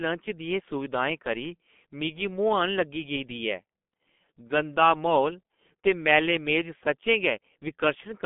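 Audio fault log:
Throughout, G.723.1 codec. Nothing reaches above 3.6 kHz, and the low end thins below about 200 Hz, so the speech sounds muffled and boxed in. Heavy coding damage makes it hoarse, with smeared consonants, which fits a rate near 6 kbit/s.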